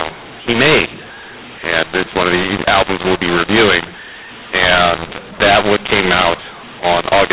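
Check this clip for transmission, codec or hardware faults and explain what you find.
One fault runs through the whole clip, on top of ordinary G.711 telephone coding whose 4 kHz band limit is audible.

Mu-law and A-law mixed up, throughout: the speech sounds harsh and gritty, levels lurch unevenly, and pauses fill with hiss instead of silence. The audio was encoded with mu-law but decoded as A-law, so each 8-bit code maps to the wrong amplitude, lifting the quietest samples well above zero.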